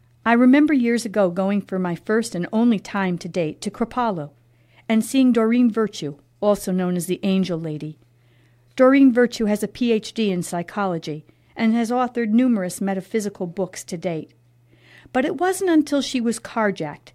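Nothing in this speech recording stands out as a technical fault, so there's nothing here to point to at any moment.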